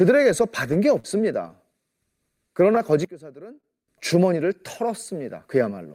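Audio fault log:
0.99–1.07 s, short concealed packet loss: about 40 ms of the speech never made it to the decoder in time, so the receiver papered over the hole with 43 ms of continued sound before blending back. You hear a quick smear there, and anything that short can just vanish.
3.05–3.88 s, one channel inverted: the voice suddenly drops by about 19 dB, as if most of it has cancelled out. That's likely one channel flipped in polarity, so the shared centre content cancels when the two are summed to mono.
3.61–3.67 s, short stall from a late packet: a packet showed up late, the jitter buffer ran dry, and the last sound got stretched by 29 ms until it arrived. Nothing's lost, but that bit hangs a touch too long with a slight buzzy dip.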